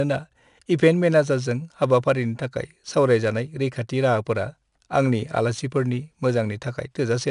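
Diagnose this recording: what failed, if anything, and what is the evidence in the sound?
Gritty hiss rides every loud syllable throughout, with nothing above 10.6 kHz; this points to a codec fault, 4-bit ADPCM compression near 22 kHz sampling, whose quantising noise tracks speech level.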